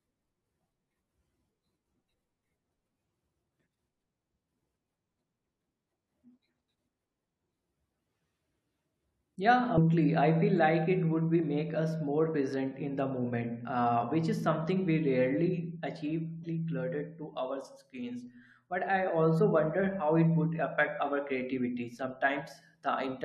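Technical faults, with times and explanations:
9.74–9.78 s, 16.43–16.45 s and 20.86 s, damaged data in a compressed stream: corrupted frames make the decoder lose sync, producing short glitches (the first just before "I feel like it"), seen as brief broadband smears or waveform discontinuities.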